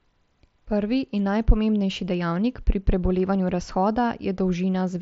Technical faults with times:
none

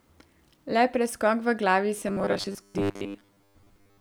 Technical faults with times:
1.98-4.00 robotic sound from repeated short buffers

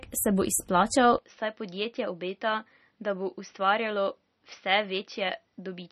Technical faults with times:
0.00-5.91 MP3 compression
1.18-5.91 input switched to a poorer device

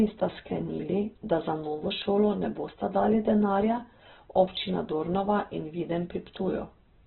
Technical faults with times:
0.00-7.06 Opus compression

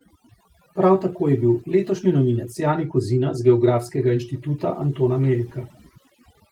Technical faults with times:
0.00-6.51 overdone noise removal

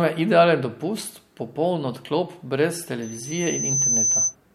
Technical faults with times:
3.02-4.35 loudspeaker feedback squeal

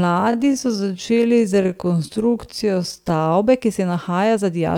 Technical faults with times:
0.00-3.34 time-stretched section

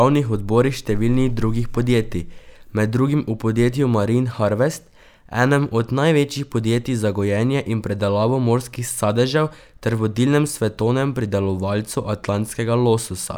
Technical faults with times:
none

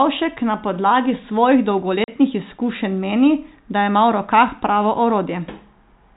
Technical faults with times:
2.04-2.08 packet loss filled with silence

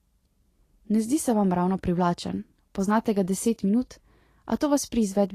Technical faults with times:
0.00-5.34 Vorbis compression

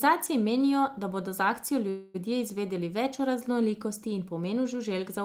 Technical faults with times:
1.89-2.16 call audio freeze

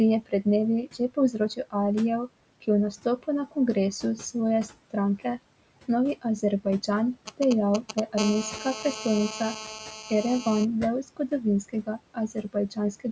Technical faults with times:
0.00-13.12 noise suppressor artifacts
0.21-0.46 speech cut by the noise suppressor
0.93-1.40 speech cut by the noise suppressor
7.27-8.00 GSM signalling bursts
8.18-10.65 GSM phone buzz
10.02-10.11 speech cut by the noise suppressor
11.69-12.78 speech cut by the noise suppressor

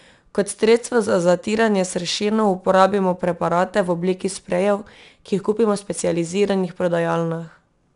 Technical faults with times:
0.00-7.96 4-bit ADPCM compression

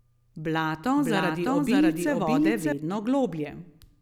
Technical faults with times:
0.96-2.72 doubled audio track

